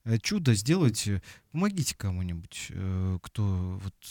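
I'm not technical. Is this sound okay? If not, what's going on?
Yes, nothing in this recording points to a technical problem with how the sound was captured or stored.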